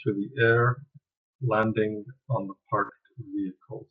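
Speech clip with concealed Bluetooth headset packet loss: packets between headset and phone dropped, and the receiver filled each gap by repeating recent waveform. At 1.62 s one tiny loss is nearly hidden. From 2.85 to 2.90 s a longer run produces a brief buzzy held tone, warbling as real audio returns.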